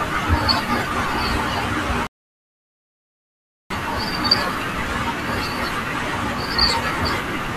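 The player ran dry of downloaded audio partway through this speech clip and halted until more data arrived, a rebuffering stall. From 2.07 s to 3.71 s the speech drops to dead silence, then picks up at exactly the point where it broke off, with nothing skipped or repeated. No content is lost, but the pause adds about 1.6 s to the running time and interrupts the flow of the speech.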